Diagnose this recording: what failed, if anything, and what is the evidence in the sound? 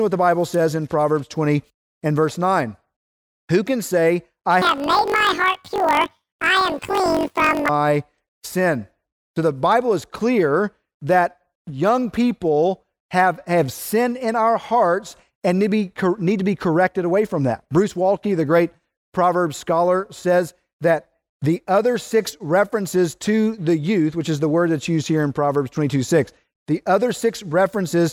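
Sample-format conversion failed: from 4.62 to 7.71 s the speech jumps an octave with a 47 Hz flutter, consistent with planar audio read as interleaved in 1024-sample blocks.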